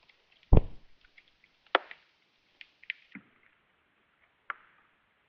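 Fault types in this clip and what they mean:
Section at the wrong speed: From 3.14 s to the end, the sound runs at about 0.64 times its proper speed. It turns slow and deep. Pitch drops by roughly seven semitones along with the tempo. The likely cause is playback or editing against the wrong clock.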